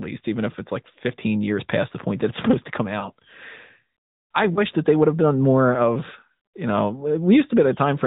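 It's a speech clip that's been through the AMR narrowband mobile codec the whole way: nothing above 4 kHz, and a plainly buzzy, synthetic edge, which fits a mid-rate mode around 10.2 kbps. There are also two lost AMR speech frames. Right after "supposed to come", from 3.00 to 3.10 s, the decoder patches over the gap by repeating its last pitch and vocal tract settings at falling gain, so you hear a short warbly dip. The same thing happens from 4.54 to 4.61 s, just before "that they would have". Both dropouts sound like a single 20 ms frame going missing.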